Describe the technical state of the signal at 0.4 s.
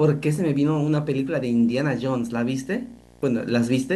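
Video or display buzz is present at 0.4 s, as it is across the whole clip. A screen or video cable is coupling interference into the audio path, so the picture's 60 Hz field rate comes through as a steady buzz with a gritty hash riding above it. It sits well beneath the speech, roughly 30 dB down.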